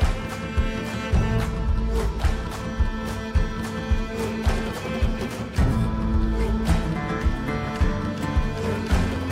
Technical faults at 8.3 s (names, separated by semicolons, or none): none